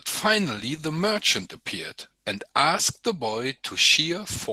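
Throughout, Opus voice compression leaves the speech hoarse and faintly robotic, suggesting a low bitrate around 16 kbps.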